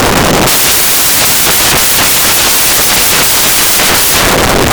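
Samples built from the wrong bytes run through the whole clip, from start to finish. The reader assembles each speech sample from its bytes incorrectly, so the rapidly fluctuating low-order bits end up as the most significant part of every value. What should be speech arrives as loud, harsh broadband noise across the entire recording, close to white on the louder sounds.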